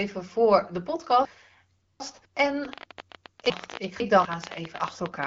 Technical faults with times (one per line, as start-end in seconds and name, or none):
1.25-2.25 chunks out of order
2.65-5.24 train of clicks
3.50-4.25 chunks out of order